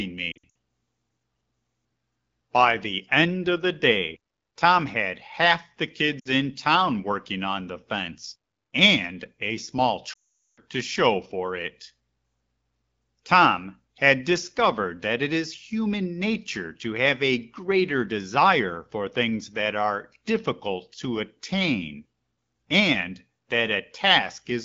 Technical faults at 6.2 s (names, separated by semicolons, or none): lost AMR speech frames